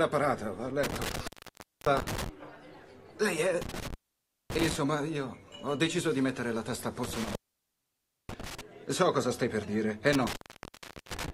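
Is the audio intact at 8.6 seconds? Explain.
No. At 8.6 s the sound is still inside an intermittent contact fault running from 7.04 to 8.61 s. A loose cable or plug opens the line for about 0.94 s, so the sound drops out, leaving faint hiss, with crackle where contact breaks and returns.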